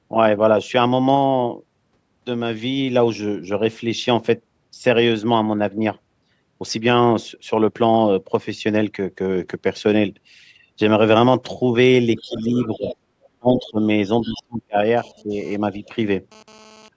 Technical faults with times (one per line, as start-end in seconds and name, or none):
12.14-13.29 other side's voice leaking through
12.22-12.89 speech suppressed in double talk
13.39-13.87 speech suppressed in double talk
14.21-14.42 other side's voice leaking through
14.26-14.76 speech suppressed in double talk
14.97-16.88 GSM phone buzz
15.23-15.37 speech suppressed in double talk
15.75-15.89 other side's voice leaking through